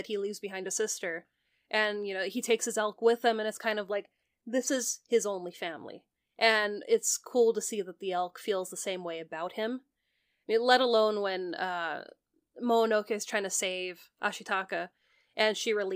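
At 10.18 s, between "same way about him" and "I mean let alone", the speech jumps forward: roughly 50 ms of audio is gone, and the two sides are butted together with no gap, so the phrasing lurches abruptly. This is likely audio missing between chunks, where a recorder or processor handling the stream in blocks, here apparently 6 s long, drops a short stretch while closing one block and starting the next.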